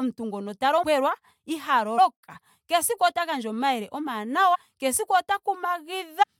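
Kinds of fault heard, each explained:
Compressed frames skipped: at 0.82, 1.97, 4.54 and 6.22 s the speech jumps ahead by roughly 150 ms, consistent with a run of several frames lost or rejected by the decoder.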